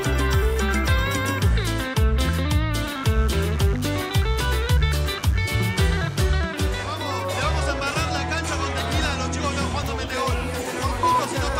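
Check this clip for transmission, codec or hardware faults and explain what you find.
A mains buzz enters the audio path between 2.95 and 6.28 s. Something on the power side, most likely a dimmer, rectifier or broken shield, is coupling sharp switching spikes into the signal twice per 50 Hz cycle. Those spikes carry a dense stack of harmonics of 50 Hz reaching up into the kilohertz range. The result is a steady, raspy buzz sitting roughly 20 dB below the wanted sound, starting and stopping at those times.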